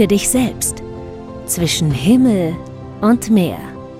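From 0.94 to 0.96 s there is a short burst of DAB burbling. The reception was weak enough that a few bit errors slipped past the error correction, at a rate of about 0.07 percent. They landed in the MP2 audio data. Corrupted samples put short blips of noise into single sub-bands. The burst is brief, which fits a handful of damaged frames. It is heard as a few quick watery blips over the sound.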